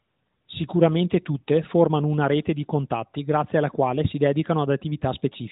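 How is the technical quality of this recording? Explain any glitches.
No glitches or technical faults turn up anywhere in the recording. The speech has the band-limited sound of a phone call through the AMR narrowband mobile codec, with nothing above about 3.8 kHz and only a light coded coloration.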